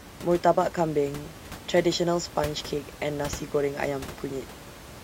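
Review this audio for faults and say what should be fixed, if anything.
Nothing stood out on listening to the speech, and the room noise sits about 15 dB beneath it, so nothing needs fixing.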